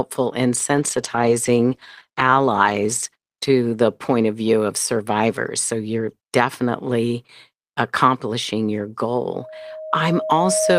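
From 0.76 s to 4.53 s the speech turns rough and watery, with the upper frequencies dulled. For about 2.7 s within that span it sounds at its coarsest, before clarity returns. This is a call bitrate drop. The call's bandwidth estimate fell, and the Opus encoder was told to spend far fewer bits, which fits a fall from about 32 kbps to about 13 kbps. At that rate the codec quantises coarsely and trims the high band.

At 9.32 s a single steady tone near 628 Hz appears and swells over roughly a second and a half. It ends up sitting about 5 dB above the speech, and the howl continues until the clip ends. This is a loudspeaker feedback squeal. A microphone is picking up the loudspeaker it feeds, and at 628 Hz the gain around that loop exceeds one, so the tone keeps reinforcing itself rather than dying away.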